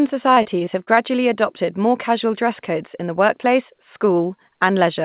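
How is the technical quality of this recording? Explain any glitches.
The recording has one glitch, early on, and the whole clip is narrowband with nothing above 4 kHz, which fits a G.711 call path. From 0.34 to 0.99 s, just before "adopted more casual dress", repeated packet loss (robotic sound) occurs. Six short holes, the longest 25 ms, are patched by stretching the preceding sound, so the speech turns choppy with pieces missing. Unlike a single dropout, it stutters repeatedly.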